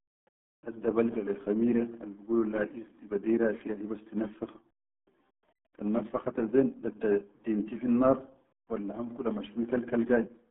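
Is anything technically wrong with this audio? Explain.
Yes. Throughout, the speech has the RealAudio 14.4 codec sound: squeezed into roughly 150 Hz to 3.5 kHz, nothing above 3.8 kHz, and heavily muffled and gargly, which fits an 8 kbit/s dial-up codec. Simple telephone filtering would narrow the band without this gargle.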